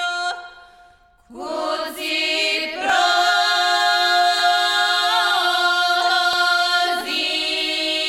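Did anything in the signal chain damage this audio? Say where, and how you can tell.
Yes. Single sharp clicks at 2.90, 4.39 and 6.33 s, each a thin vertical line in the spectrum, point to dropped samples, likely at the driver or buffer stage. A fraction of a millisecond goes missing, so the waveform jumps to a later value. Unlike a dropout, no gap or silence follows.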